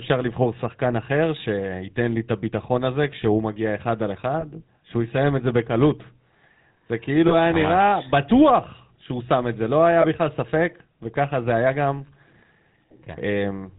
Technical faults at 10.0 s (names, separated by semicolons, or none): GSM full-rate codec; lost GSM frames